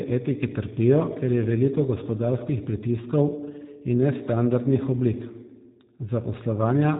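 Speech running through the G.729 codec from start to finish: nothing above 3.8 kHz survives, and the voice has a rough, buzzy, synthetic grain. That grain, from rebuilding speech out of a few pulses per frame at what sounds like 8 kbit/s, separates it from simple band-limiting, which only muffles.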